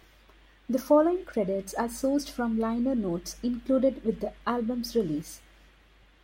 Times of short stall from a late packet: none

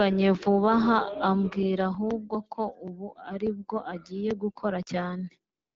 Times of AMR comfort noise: 5.53-5.75

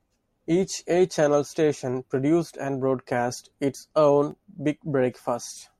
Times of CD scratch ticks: 4.31-4.99

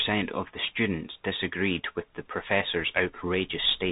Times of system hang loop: none

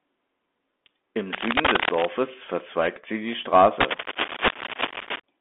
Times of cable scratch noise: 1.32-2.07, 3.80-5.20

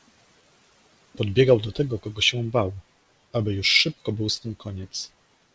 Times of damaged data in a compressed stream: none

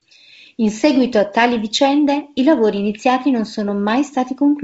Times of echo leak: none

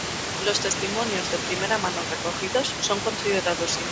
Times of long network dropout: none

